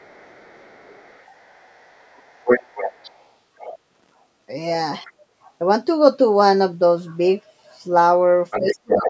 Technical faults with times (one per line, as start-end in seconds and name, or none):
0.00-3.29 other side's voice leaking through
3.59-3.78 other side's voice leaking through
3.90-4.14 loose connector crackle
5.05-5.12 other side's voice leaking through
8.51-9.10 other side's voice leaking through
8.59-9.10 speech suppressed in double talk